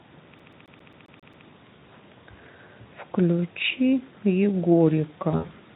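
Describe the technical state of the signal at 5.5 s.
At 5.5 s the sound falls inside a stretch of VoIP packet loss concealed by the speech codec, running from 5.31 to 5.52 s. About 140 ms of audio is missing across a 200 ms window, the longest gap 80 ms, which fits seven lost 20 ms frames. The decoder extrapolates from its last pitch and filter while lowering gain, so the sound turns into a buzzy tone or coloured noise that fades. On a spectrogram the harmonics flatten into frozen horizontal bands that dim; the waveform shows near-identical repeating cycles shrinking in amplitude. The Speex coding itself adds only light damage around this stretch.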